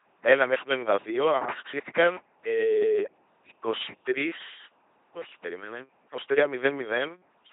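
LPC-10 vocoder damage runs through the whole of this speech recording, and it is heavy. The voice is rebuilt from a simple all-pole vocal tract model excited either by a pulse train or by noise. Every instant is forced to be fully voiced or fully unvoiced, so the result is a buzzy, mechanical robot tone with hissy consonants. Nothing is left above 3.8 kHz, and the coarseness fits a 2.4 kbit/s rate.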